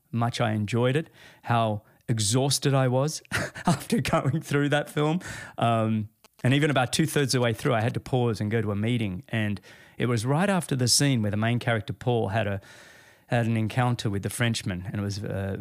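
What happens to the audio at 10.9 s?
At 10.9 s the speech carries on without a break, dropout, click or distortion; the audio is intact at that moment.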